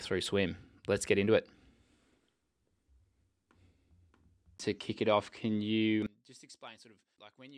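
It's a speech clip, and from 6.06 s right through to the end at 7.57 s the sound collapses, dropping by about 27 dB with the background going along with it. That's the signature of one channel inverted: likely one side of a stereo pair had its polarity flipped, so the shared content cancelled when the two were folded down to mono, leaving only the small difference between them.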